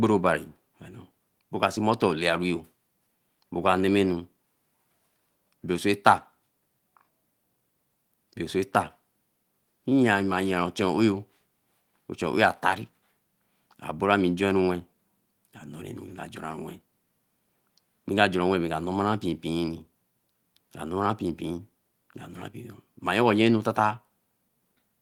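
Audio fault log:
No faults are heard anywhere in this speech recording. Nothing in it calls for an entry in the log.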